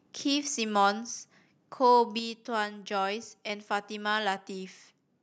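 A speech clip with one fault. At 2.19 s the whole signal drops by about 5 dB in a single step. The voice and the background fall together. This is a microphone volume stepped down, likely by call software lowering the device's input level.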